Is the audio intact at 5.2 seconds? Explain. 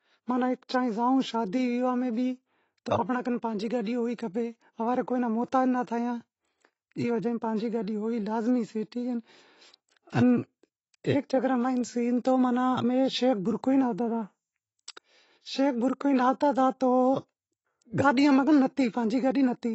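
No. At 5.2 seconds, as throughout the clip, the speech sounds dull and smeared, with a fizzy, warbling edge on sibilants and held sounds, and nothing is present above 8 kHz. This is AAC compression, likely from AAC-LC at a low bitrate, which fits about 24 kbps. With too few bits for each frame, the encoder cuts off the top of the spectrum and quantises the remaining bands coarsely, leaving gaps that shimmer audibly.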